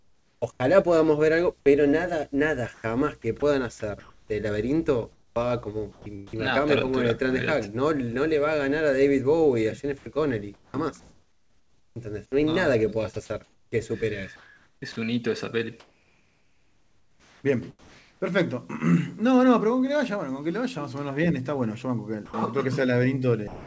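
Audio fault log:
0.00–0.60 s, comfort noise in place of the background: about 0.5 s of real ambience becomes steady, featureless hiss, likely discontinuous transmission filling the pause, unlike chopping, which flickers repeatedly.
0.40 s, onset clipped by the voice detector: the returning sound starts abruptly, its first 20 ms missing, likely a slow voice detector, a single hard edge rather than repeated dropouts.
2.74–6.38 s, 9.98–18.32 s, 22.26–23.66 s, sound chopped by the voice detector: edges and quiet parts drop to synthetic noise (about 0.9 s, 4.1 s and 0.3 s lost), likely the detector toggling.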